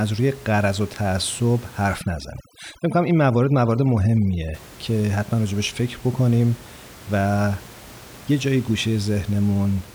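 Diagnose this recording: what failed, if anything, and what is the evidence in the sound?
Overdone noise removal in the call processing, 1.99 to 4.54 s: the suppressor gated off bands near its noise estimate, leaving twinkling near-silence and taking quiet parts of the speech with it.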